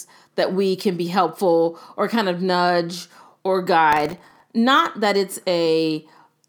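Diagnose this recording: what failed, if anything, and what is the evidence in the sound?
Processor overload crackle runs from 3.93 to 4.43 s, starting just after "kind of nudge or". The fault sits at the driver or buffer stage. For about half a second the speech is overlaid with a gritty, tearing crackle that stops when the load passes. The grain is very fine, which fits buffers under a millisecond long, with a few dozen deadlines missed again and again across that stretch. Each miss replays stale audio with hard edges, and the run of clicks merges into the crackle.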